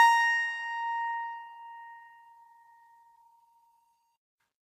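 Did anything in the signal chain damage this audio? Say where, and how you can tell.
Yes. Across the whole music clip the top end stops dead around 15.2 kHz, and the texture carries two layers of different coding artefacts heard together. That mix points to the codec stage, most likely transcoding between lossy codecs, an older WMA-style encode at about 96 kbit/s re-encoded to AAC-LC at 48 kbit/s. The second encoder wasted bits on the first one's artefacts and added its own, while the lowest cut-off survived.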